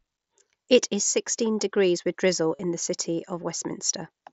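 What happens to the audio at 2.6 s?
A short run of headset voice packets failed to arrive between 2.56 and 2.60 s, right after "sixteen degrees with drizzle": concealed Bluetooth headset packet loss. The receiver covered the roughly 37.5 ms gap by repeating the closest-matching stretch of the preceding waveform, which fits about five lost frames in a row. The patched span comes out as a buzzy, steady tone at full level, then a slight warble as the real wideband mSBC audio resumes.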